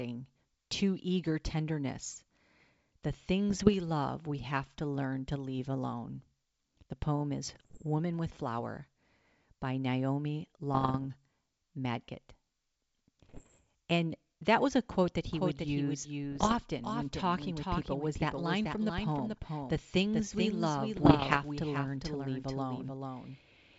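Speech carried over a G.722 wideband link, whose coding stays clean, suffers bit errors on an ADPCM link at 3.50–3.74 s (ending just before "love we have to"), 7.44–7.85 s, 10.74–11.07 s, 13.29–13.59 s, 16.32–16.55 s and 20.96–21.39 s. Flipped bits, at up to about one percent, knock the decoder's step size and predictor off track, so each burst pops and turns rough, with brief level jumps. From 15.31 s, right after "was a quote that", to the end, a doubled audio track appears, likely from a second, slower capture path mixed back in. A dry, full-band copy about 5 dB quieter trails the original by around 400 ms, and it starts abruptly.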